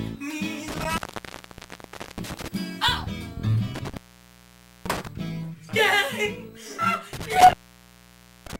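A loose cable or plug keeps opening for a moment, an intermittent contact, at 0.68 to 2.48 s, 3.75 to 5.07 s and 7.13 to 8.59 s. Each time the signal drops out for about 1.2 s, 0.89 s and 0.93 s, crackling at the edges and leaving faint hiss.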